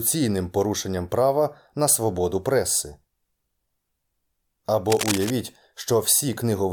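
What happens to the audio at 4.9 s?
From 4.85 to 5.33 s, a burst of cable scratch noise sits over the speech: dense, uneven scratching and rustling only a little quieter than the voice itself. It is likely caused by a worn cable or connector being moved, its contact resistance jumping erratically. On a waveform this shows as ragged, spiky bursts riding on the signal; on a spectrogram, as irregular broadband smears and vertical streaks spanning that half-second.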